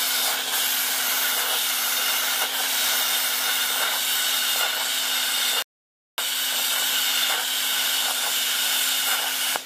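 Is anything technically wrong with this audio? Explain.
Yes. At 5.62 s the audio drops to silence and stays there until 6.18 s, then picks up at exactly the point where it broke off, with nothing skipped. That is a rebuffering stall: playback consumed all the audio it had downloaded and had to halt until more data came in. No material is lost, but the gap inserts about 0.56 s of dead air, stretching the clip's overall running time by that amount.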